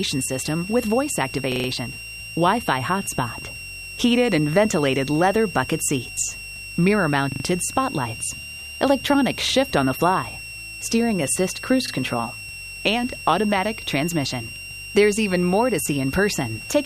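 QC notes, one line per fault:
throughout: switching supply whistle. A switching power supply is running in an audible burst mode or beating with another, leaving a thin whistle drifting between 2.71 and 2.8 kHz, roughly 15 dB under the audio.
1.52–1.68 s, 7.32–7.44 s, 11.88–11.92 s: repeated buffer. Audio arrived late, so the last block was replayed four, three and then one extra time, giving hard-joined stutters that fit a 40 ms buffer, with nothing appearing skipped afterwards.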